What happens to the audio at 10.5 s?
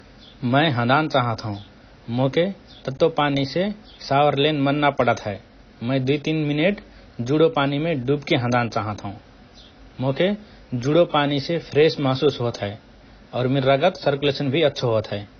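Speech at 10.5 s sounds dull and smeared, with nothing above 6.6 kHz, as throughout the clip; likely AAC compression at a low bitrate, around 24 kbps.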